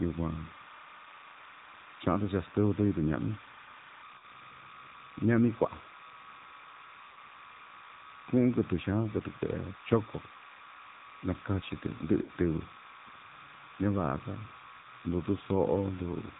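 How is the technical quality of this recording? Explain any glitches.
Technical quality is poor: the speech carries constant timecode interference and plainly audible low-bitrate mobile codec damage, and it drops out briefly four times.

Timecode bleed runs through the whole clip. A square-wave code switching between roughly 1 and 2 kHz, at 30 frames per second, has leaked in from an adjacent track or cable. It sits roughly 20 dB below the speech as a steady chirping warble that doesn't follow the voice, and the codec adds a swirl to it.

The AMR narrowband mobile codec also affects the entire recording. The audio was squeezed to an 8 kHz sample rate and rebuilt from a vocal-tract model excited by sparse pulses, at a low rate that fits roughly 7.4 kbps. Nothing above 4 kHz survives, so the speech sounds muffled and telephone-like. The synthetic buzz is plainly audible, and the timecode tones come through as a warbling whirl.

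Lost AMR speech frames occur at 4.18 to 4.25 s, 7.12 to 7.18 s, 12.22 to 12.30 s and 14.82 to 14.87 s. These sound like losing about 40, 40, 60 and 20 ms, the equivalent of one to three 20 ms frames. The decoder bridged each gap by repeating the last good pitch and filter settings at falling gain. Each is heard as a short smeared dip or warble, and the voice comes back rough for a moment. The 12.2 s event is the longest.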